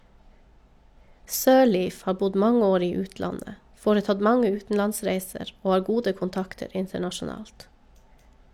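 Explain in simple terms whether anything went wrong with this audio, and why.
Nothing went wrong here; the recording runs without any technical fault.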